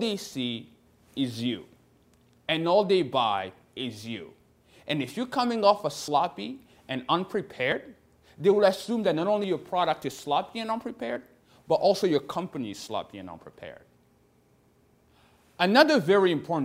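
At 6.08, 7.72, 9.44 and 11.16 s the audio jumps forward with no gap of silence, each time skipping around 40 ms of sound. The evenly spaced repeats point to a dropped buffer (overrun) as the likely cause: the software fell behind, the hardware overwrote a block of samples before it was read, and the audio on either side was spliced directly together.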